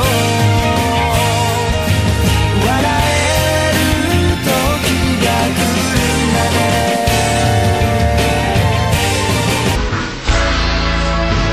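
From 9.76 s to 11.53 s, the end of the clip, a section at the wrong speed: playback drops to 0.533 times the original rate, so the sound turns slow and heavy and its pitch falls by about ten semitones in one step. Speed and pitch shift together, which points to a likely mismatch between the clock the section was recorded against and the one used to edit or play it back.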